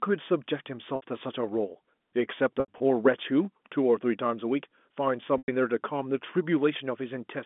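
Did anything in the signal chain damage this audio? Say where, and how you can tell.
Yes, at the network stage: packet loss with pitch repetition at 0.96–1.02 s (60 ms), 2.6–2.8 s (120 ms lost across 200 ms, longest gap 80 ms) and 5.38–5.48 s (100 ms). The receiver fills each gap by looping the last pitch cycle, which gives a held, buzzy tone that fades out, in steps that fit 20 ms packets.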